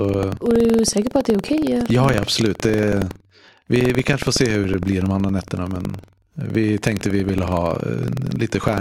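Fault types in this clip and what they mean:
Buffer tearing: the software filling the playback ring buffer and the hardware draining it have drifted until they cross inside every period, so a small slice of each buffer, a few percent, repeats audio from roughly a tenth of a second earlier, with hard joins on either side. Throughout this speech it gives a steady robotic rattle at about 21.5 Hz, which fits a 2048-sample buffer. Unlike mains hum, the rattle vanishes in the pauses.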